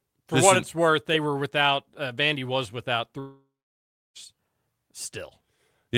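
Long network dropout, 3.19 to 4.17 s, after "was without": the last sound buzzes away into silence, likely from lost packets, and 0.96 s is gone.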